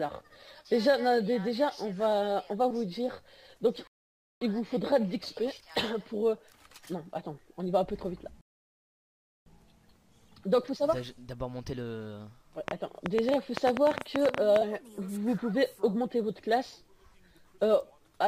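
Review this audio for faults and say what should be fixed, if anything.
Rebuffering stalls occur at 3.87 to 4.41 s and 8.41 to 9.46 s. The player ran out of buffered audio, fell silent, then resumed at the same point, adding 0.54 s and 1.05 s. Nothing is lost. A larger playback buffer or a steadier delivery rate would prevent this.

A train of clicks runs from 12.68 to 14.57 s: about twenty similar pulses at roughly 10 per second, unevenly spaced and about 20 dB above the signal. The likely cause is electrical interference or a faulty connection or supply. Shielding, secure connectors and a clean power source would prevent it.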